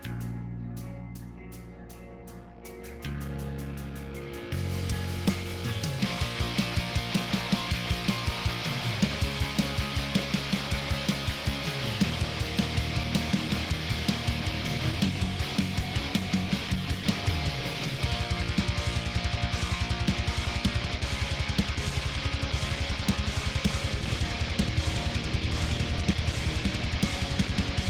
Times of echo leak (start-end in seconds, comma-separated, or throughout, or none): none